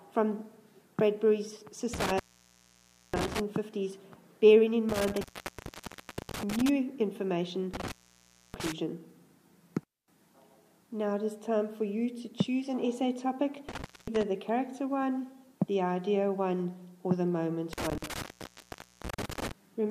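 Intermittent contact breaks the sound five times: 1.94–3.40 s (open about 0.94 s), 4.89–6.69 s (1.10 s), 7.74–8.72 s (0.62 s), 13.69–14.23 s (0.23 s) and 17.73–19.51 s (0.83 s). A loose plug or cable lets the signal path open briefly, so the audio cuts out with crackle around each break. That scratchy edge and the faint hiss left in the gap set it apart from a digital dropout, which falls to clean silence.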